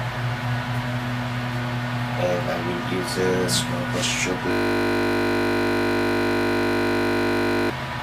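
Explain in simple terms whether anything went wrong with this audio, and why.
Something went wrong at 4.51 s: a system hang loop. The computer stalled, and the sound hardware kept replaying the same 20 ms piece of audio until 7.70 s. Repeating that fast, 50 times a second, it comes out as a steady buzz.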